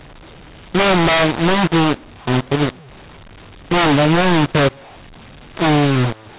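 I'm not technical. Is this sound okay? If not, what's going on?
No. The whole recording sounds harsh and gritty, with hiss filling the pauses: a mu-law and A-law mix-up, where telephone audio saved one way was played back the other.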